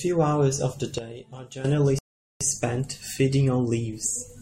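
At 0.98 s, right after "hours of the", a digital gain change was likely applied in a single step with no ramp. This is a sudden gain jump: the speech and the background noise drop together by about 12 dB and stay lower until 1.64 s.

At 1.99 s the player ran out of downloaded audio and waited for more, a rebuffering stall. The speech cuts to silence for 0.42 s and resumes at 2.41 s exactly where it stopped. Nothing is lost, but that much time is added.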